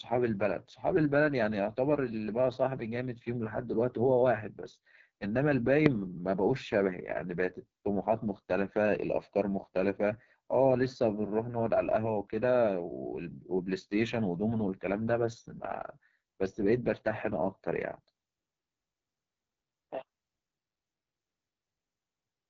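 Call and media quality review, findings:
AMR wideband (HD Voice) codec, whole clip. Speech rough and raspy throughout, no content above about 7.7 kHz. Heavy damage fits the lowest mode, 6.6 kbit/s. Pulse-excited vocal tract model starved of bits, top band filled with shaped noise. Unlike narrowband AMR, sibilance extends well past 4 kHz. Unlike packet loss, the grit is steady, with no dropouts or glitches at particular moments.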